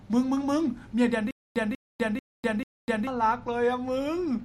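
From 1.31 to 3.07 s the speech catches in a stutter with silent gaps: a 191 ms burst repeats four times, each followed by 250 ms of dead silence, every 441 ms. This is likely a stalled stream replaying its last fragment, losing the audio in between.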